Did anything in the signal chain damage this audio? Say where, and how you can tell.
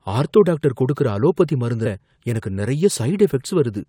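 Yes, compressed frames were skipped at the codec stage. At 1.85 s the speech jumps ahead by about ten 23.2 ms frames, losing roughly a fifth of a second. Unlike a buffer dropout, there's no silent gap; the speech simply jumps ahead where the missing frames should be.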